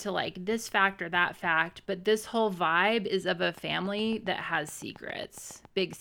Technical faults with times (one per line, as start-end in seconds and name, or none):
3.43-5.94 train of clicks